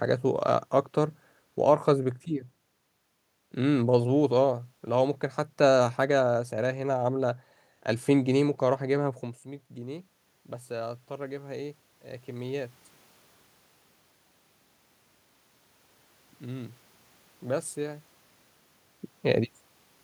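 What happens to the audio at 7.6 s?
Nothing goes wrong at 7.6 s; the speech carries on intact through that moment.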